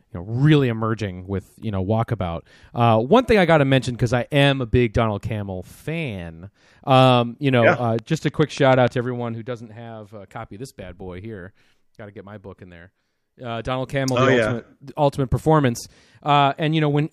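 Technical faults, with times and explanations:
7.99–8.89 s: train of clicks, after "you know yeah uh". About seven regular ticks, 6.8 per second, around 10 dB above speech. Likely equipment interference.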